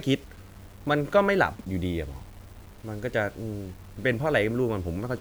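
Throughout the speech, quiet passages turn gritty with grainy distortion that tracks the signal, roughly 30 dB down, likely low bit depth without dither: rounding to 8 bits.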